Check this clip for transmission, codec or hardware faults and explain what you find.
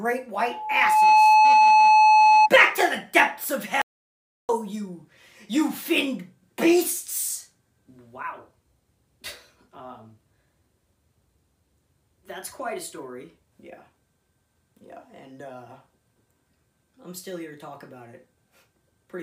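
Two faults are present: a loudspeaker feedback squeal near the start and an audio dropout to silence shortly after.

From 0.35 s to 2.50 s there is loudspeaker feedback squeal centred on 859 Hz. A microphone was picking up a loudspeaker carrying its own signal, and at that frequency the loop gain went above unity, so the tone fed on itself. It swells over a little under a second into a steady squeal, ending up about 10 dB above the wanted sound.

From 3.82 s to 4.49 s the audio drops out to silence for about 0.67 s. The signal stops abruptly mid-flow and resumes just as abruptly, and the gap is silence with no room tone or noise floor beneath it. That points to the input being lost while recording continued with silence, likely a momentary disconnection, link failure or accidental mute. Whatever occurred in that interval is not recoverable.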